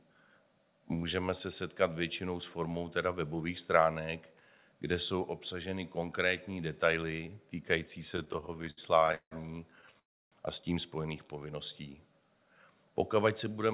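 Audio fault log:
8.12–9.33 s and 9.81–9.97 s, repeated stalls (stutter): late packets emptied the jitter buffer 18 times, then 4 more times. Each wait was filled by continuing the last sound, with about 409 ms and 39 ms added, nothing lost, and the longest gap 164 ms. The speech after "obsaženy konkrétní detaily týkající" drags and stutters. A spectrogram shows repeated smeared, frozen bands.
9.99–10.34 s, call audio freeze: packets likely held up in transit emptied the buffer. The concealed sound fades, leaving about 310 ms of near-silence before "a s tím spojených" resumes, with nothing missing. The waveform shows a flat gap.
13.46–13.74 s, jitter buffer speed-up: the receiver trimmed roughly 40 ms as short pitch-period pieces to shrink its delay. The speech runs at 110% speed with the same pitch and sounds hurried. The waveform shows compressed syllables without spectral shift.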